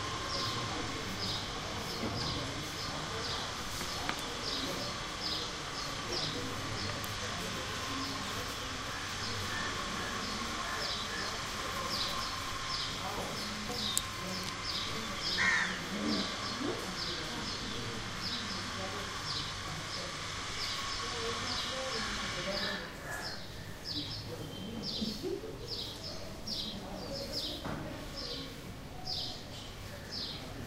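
No technical faults can be heard anywhere in this recording; the signal holds steady and intact for its whole duration.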